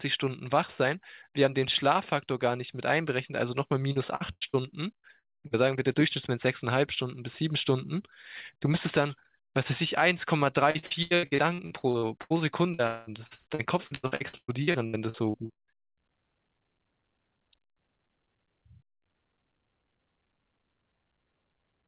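From 3.92 to 4.65 s there is repeated packet loss, producing a robotic sound. Four gaps, the longest 89 ms, are patched by continuing the last sound. About a third of that stretch is filled in, so the speech turns choppy.

At 4.96 s a burst of packet loss removes about 80 ms. The last sound is held and faded, and the speech resumes with that piece missing.

Short concealed packet loss follows at 5.19 and 5.47 s. Each patch lasts under 40 ms and is heard as a brief smear or wobble.

Repeated packet loss returns from 10.71 to 12.33 s, with 13 gaps covering about 39% of the span. It comes back from 12.74 to 15.81 s, with 21 gaps, the longest 198 ms. Both stretches sound robotic and broken. Throughout, nothing above 4 kHz passes the call path, which fits G.711 telephone coding.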